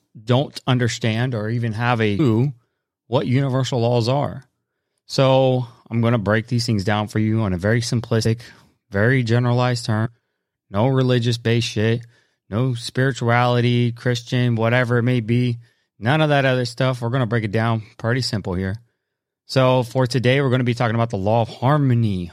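At 2.18, 8.24 and 10.05 s the speech jumps ahead. These are compressed frames skipped. Missing or damaged frames were never decoded, losing about 300, 100 and 150 ms of audio. Overlapping neighbour frames leave a brief smeared blip, not a click.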